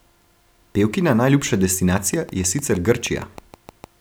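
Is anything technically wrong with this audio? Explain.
Yes. From 1.98 s to 3.85 s there is a train of clicks, likely from interference or a faulty connection or power supply injecting repeated pulses. About fifteen near-identical clicks arrive at a regular 6.45 per second, roughly as loud as the speech, ticking over it and through pauses.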